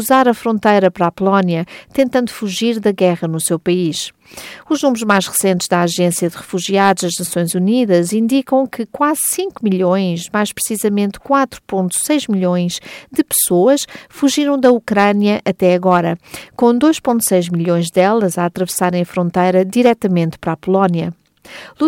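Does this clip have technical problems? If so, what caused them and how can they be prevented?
Yes: at 11.35 s the stream most likely lost about a single sample, a case of dropped samples, so the waveform leaps straight to a later value. That step is heard as one sharp click and shows as a thin vertical line in the spectrum. Keeping buffers deep enough and clocks synchronised between capture and playback prevents such drops.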